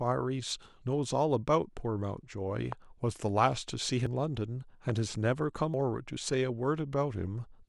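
A speech recording with two kinds of fault. Two loud pops, at 2.72 to 2.74 s and 4.90 to 4.92 s, each peak about 15 dB above the speech, which continues underneath. The likely cause is an electrical transient such as a switch or static discharge. Each shows as a tall, narrow spike on the waveform and a thin vertical stripe across all frequencies on a spectrogram. There are also compressed frames skipped at 4.07 s and 5.74 s, where the audio jumps ahead by about 200 ms, consistent with losing two frames of about 93 ms each. This is visible as an abrupt discontinuity in the spectrogram's harmonic pattern, with no gap in the waveform.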